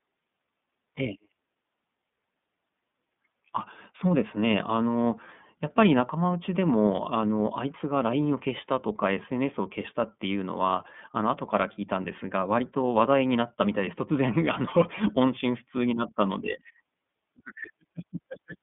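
Speech, heard through the iLBC codec from start to finish. The line passes roughly 150 Hz to 3.6 kHz, with nothing above 3.7 kHz, so sibilants and consonant detail are dulled and the low end is thin. The codec damage is plainly audible as a rough, synthetic buzz on the voice. Each block of excitation is coded on its own, and the graininess fits 30 ms frames in the 13.33 kbps mode.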